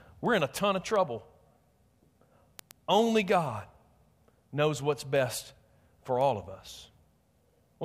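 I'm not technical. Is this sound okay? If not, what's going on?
No. From 0.14 s to 7.85 s there are word clock ticks, sharp clicks of uneven strength about ten times a second behind the speech. Two digital devices are running on slightly different clocks. Each time they drift past each other, one sample is lost or repeated.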